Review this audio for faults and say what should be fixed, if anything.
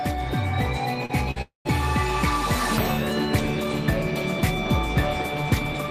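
Three network faults sit close together in the first couple of seconds, and all three are worth fixing.

First, a short concealed packet loss at 1.05 to 1.11 s. About 40 ms of audio never reached the decoder in time, so the receiver patched the hole by extending the sound that came just before it for roughly 37 ms, then crossfaded back into the real signal. You hear it as a quick smear or wobble rather than a clean gap, and anything brief that fell inside that window is gone.

Next, a burst of packet loss at 1.31 to 1.38 s. Here about 40 ms went missing in a row, and the concealment ran for around 45 ms, carrying the preceding sound forward and turning it down as the gap went on. That gives a short held buzz or fading hiss before playback picks up again further along. The material that should have filled that stretch simply isn't there.

Then, almost straight after, a long network dropout from 1.42 to 1.67 s, most likely a stretch where nothing arrived at the receiver at all. 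Roughly 240 ms is missing. The concealer extends the last sound for about 234 ms while fading it out, and around 140 ms of that span ends up as near-silence before the audio comes back. Whatever belonged in that quarter second has been lost, not just masked.

To prevent this, stabilise the network path or add forward error correction and a slightly deeper jitter buffer, so that late or lost packets can be recovered instead of concealed.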